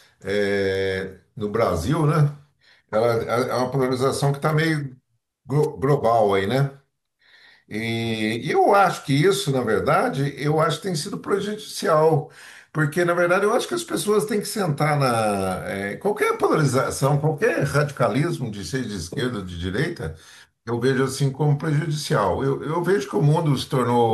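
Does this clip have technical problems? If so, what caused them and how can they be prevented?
Yes. At 5.62 to 5.66 s the speech is hit by a wireless microphone noise hit, a brief swish of static lasting about 40 ms. The analogue FM radio link from the microphone briefly faded. Reflected copies of the signal arrived out of step and cancelled the direct one. With less signal reaching it, the receiver's own noise rose and covered the voice. Prevent it with diversity receivers, good antenna placement and a clear line of sight.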